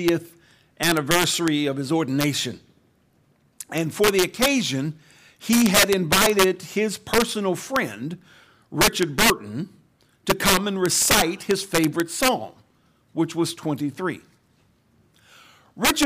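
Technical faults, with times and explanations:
Throughout, integer overflow: the speech was driven about 11 dB past the integer limit, and roughly one percent of samples went over it. Instead of being held at the maximum, each of those values wrapped around to the opposite extreme of the range, so the waveform jumps from near full positive to full negative in a single step. These jumps land on the loudest peaks and are heard as cracks, much sharper than clipping.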